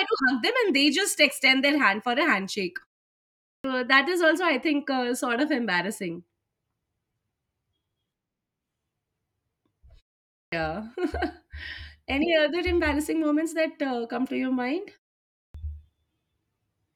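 Clipped start after a pause occurs at 3.54 s, before "that is also i", at 10.42 s, and at 15.44 s, after "come to your mind". After each silence of roughly half a second or more, the output path wakes late and swallows about 100 ms, so speech bursts in abruptly, missing its opening sounds.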